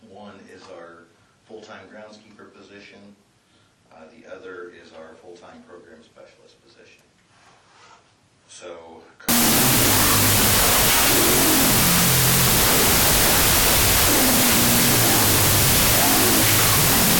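From 9.29 s to the end, a wrong sample width fault sets in. The sound points to 32-bit float data read as 16-bit integers, so each float is split into integer pairs, only some of which keep traces of the real signal. Loud noise swamps the audio, which plays at half speed and lower pitch.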